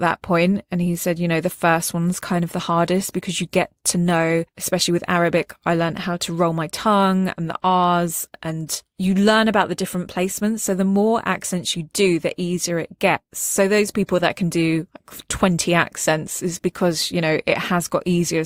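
No technical faults are audible.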